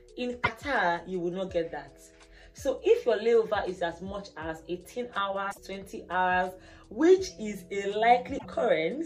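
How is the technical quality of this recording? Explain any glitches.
Three short glitches interrupt the audio. The likely cause is a broken MP3 bit reservoir, at 0.43 to 0.49 s, 5.50 to 5.58 s and 8.37 to 8.46 s. MP3 frames can store data in earlier frames; when frames drop out, the next frame reads the wrong bytes. The audio skips ahead, and each 58 to 84 ms disruption, about two to three frames of roughly 26 ms, comes out as a chirp, noise burst or brief gap.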